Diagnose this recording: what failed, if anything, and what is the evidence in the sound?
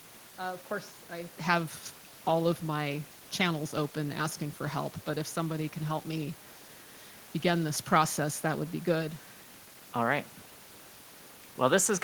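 Nothing in the chain has failed: the speech arrives intact, with only the room's own background noise sitting about 24 dB below it, which belongs to the recording itself rather than to any stage of the system.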